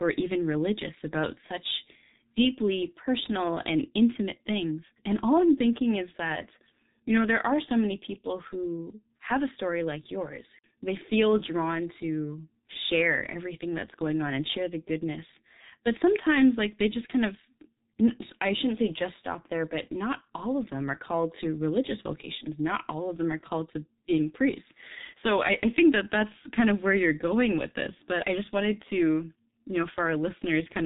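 Throughout the speech, heavy G.723.1 codec damage removes everything above 3.8 kHz and leaves a muffled, hoarse tone with smeared consonants, which fits a bitrate near 6 kbit/s. Unlike a plain low-pass, the hoarseness comes from its coarse, slowly updated voice model.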